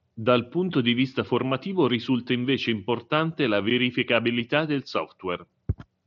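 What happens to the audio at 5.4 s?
Nothing goes wrong at 5.4 s: the speech carries on intact through that moment, passing through the Bluetooth mSBC headset codec as normal.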